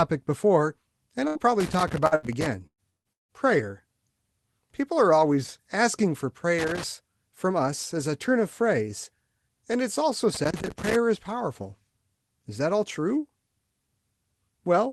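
Speech heard through a call path, with an upper limit near 12 kHz that fits an Opus super-wideband setting, carries several clustered faults. Burst of packet loss occurs at 1.27–1.38 s, 2.15–2.26 s and 2.67–2.81 s. In each, about 80 ms (120 ms in the third) of audio never arrived, and the receiver extended the last sound for roughly 70–110 ms, letting it decay into a held buzz or hiss. The third burst ends in about 80 ms of silence before the audio jumps forward past the lost section. Loose connector crackle appears at 1.60–2.46 s, 6.58–6.84 s and 10.34–10.96 s as irregular scratchy bursts. A contact is intermittently making and breaking, chopping the signal into rapid fragments. Short concealed packet loss at 2.07–2.14 s, inside the first crackle, is a brief smear. About 40 ms never reached the decoder, and the receiver bridged the hole with roughly 44 ms of synthesized continuation before blending back into the real audio. 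Long network dropout marks two stretches, 2.90–3.08 s and 3.13–3.32 s, each losing about 160 ms. A short fading continuation gives way to about 130 ms and then 150 ms of dead silence before sound resumes further along, which points to a likely network stall rather than isolated packet drops.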